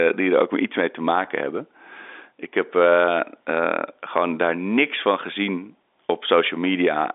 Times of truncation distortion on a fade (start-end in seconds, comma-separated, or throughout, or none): none